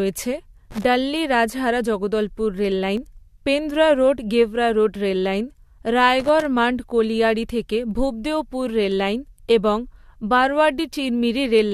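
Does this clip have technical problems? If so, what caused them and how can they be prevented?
Yes. Irregular scratchy crackle bursts at 0.71 to 0.85 s, just before "ডাল্লি রাজহারা জগদলপুর", and again at 6.20 to 6.45 s, are loose connector crackle: a worn or dirty contact repeatedly breaks and remakes the signal path as it shifts, chopping the audio. Cleaning or replacing and securing the connector and cable prevents this.

Brief clicks or tiny skips at 2.97 s (between "ডাল্লি রাজহারা জগদলপুর" and "পেন্দ্রা রোড গেভরা"), 4.95 s and 10.93 s come from overlap between stream segments. Adjacent 2-second segments carry overlapping timestamps, so the player discards a few milliseconds of real audio and the waveform jumps. Correct segment timestamping at the encoder or packager prevents it.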